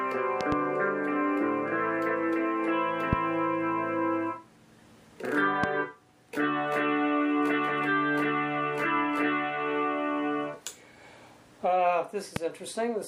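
Sharp loud pops cut through the sound, which continues underneath: a quick double pop at 0.41–0.55 s, then single pops at 3.13–3.15 s, 5.64–5.66 s and 12.36–12.39 s, each jumping well above the surrounding level. The likely cause is brief voltage spikes, from a switch, static or a driver glitch, added into the signal path.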